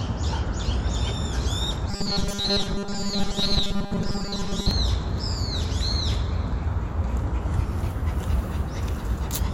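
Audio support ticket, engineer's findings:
Robotic sound from repeated short buffers, 1.91 to 4.71 s. Rigid metallic buzz at 200 Hz over the sound. Likely cause: playback buffer starved, with the last ~5 ms looped to fill gaps while incoming audio is skipped. Most of the stretch is repeated material. Pitch fixed by loop length.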